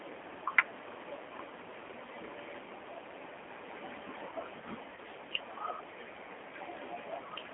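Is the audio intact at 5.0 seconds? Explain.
No, not quite. There's VoIP packet loss concealed by the speech codec from 4.95 to 4.99 s, a 20 ms gap consistent with a single lost packet. The decoder filled it by extending its last pitch and filter at falling gain. That gives a short buzzy or noisy smear, and since each frame builds on the previous one, the sound at 5.0 s is likely still a bit weak or rough while it recovers.

Underneath that, the whole clip is running through the G.729 codec at 8 kbit/s, squeezed into roughly a 200 Hz to 3.4 kHz phone band. The speech is rebuilt from a vocal tract model and a few pulses per frame, so it has a plainly audible rough, synthetic edge.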